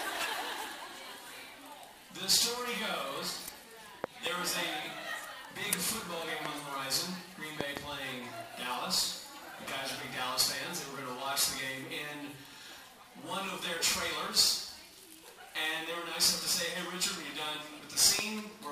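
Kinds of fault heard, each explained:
Loud pop: A sudden voltage step or pulse, likely from a plug, switch, static discharge or driver glitch, is added to the signal and shaped by the circuitry after it. The result is a sharp pop roughly 20 dB above the surrounding level, with the sound carrying on underneath. A double pop falls at 4.04–4.29 s and another at 7.61–7.79 s, with single pops at 6.46 s and 18.19 s.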